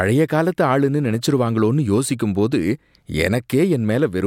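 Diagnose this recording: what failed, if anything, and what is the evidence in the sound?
Nothing failed that can be heard in this speech recording. No stage from capture through to playback leaves any mark on the sound that would call for a diagnosis.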